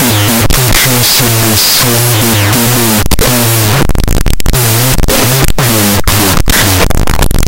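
Wrong sample width runs throughout the clip, from the first second to the last. Audio stored as 16-bit integers is being read as unsigned 8-bit, so every original sample is split into two. One byte carries the top bits of the real signal and the other carries near-random low bits. The speech sits under loud, harsh noise, dragged to half speed, an octave below its true pitch.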